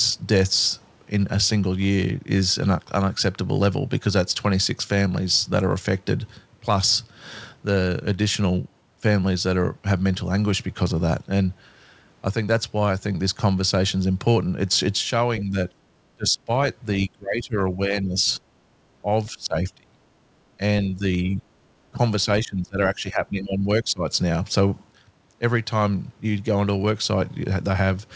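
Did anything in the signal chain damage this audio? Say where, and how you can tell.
Yes, at the call processing stage. The speech ducks by roughly 5 to 30 dB at 15.44–15.57, 16.16–16.5, 16.99–18.41, 19.31–20.0, 20.89–21.47, 21.93–21.99 and 22.4–24.03 s. This is likely speech suppressed in double talk: the echo canceller could not separate this side's talk from the overlapping far-end echo and turned both down. The G.722 path's 8 kHz ceiling is heard.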